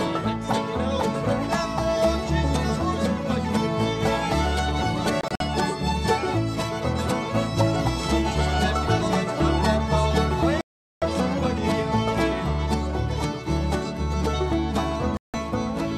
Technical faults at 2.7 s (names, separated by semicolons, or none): none